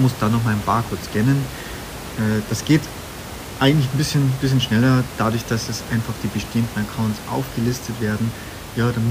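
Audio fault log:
Nothing wrong turns up in this speech clip, just some ordinary room noise sitting about 13 dB under the talking.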